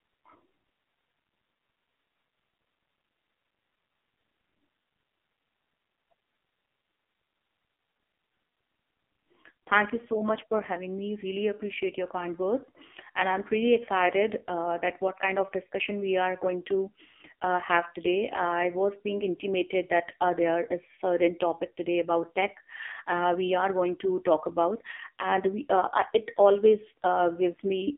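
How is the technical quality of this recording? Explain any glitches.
The technical quality is poor, because the speech has passed through a heavily compressed mobile phone codec for its whole length.

AMR narrowband mobile codec, throughout: the band is squeezed to roughly 250 Hz to 3.5 kHz, with nothing above 3.7 kHz. Each 20 ms frame is rebuilt from a vocal-tract model and a few pulses. The heavy buzzy, synthetic texture fits a low 5.9 kbps mode.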